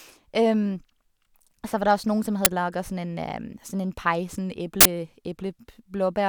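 At 2.45 s, after "der også noen som", and 4.81 to 4.85 s, after "en pai sånn", an uninitialised buffer plays leftover memory as a loud crack and then a burst of digital noise, fitting 512- and 2048-sample blocks.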